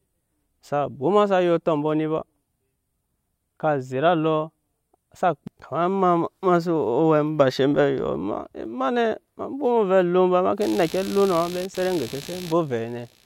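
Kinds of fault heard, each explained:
Computer activity noise: From 10.61 s to the end of the clip, a buzzing chatter pulsing at roughly 70 times a second sits around 20 dB below the speech. Changing load on the computer's processor, graphics or mouse shifts the ground the audio circuit shares, and that shift leaks into the recording. Unlike steady mains hum, it appears abruptly and follows the machine's activity rather than running constantly at a fixed tone.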